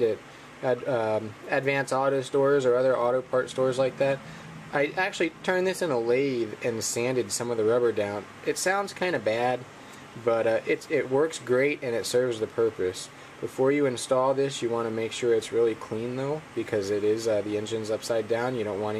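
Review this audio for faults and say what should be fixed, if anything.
Nothing needs fixing, since the signal holds steady throughout with no audible technical faults at any point.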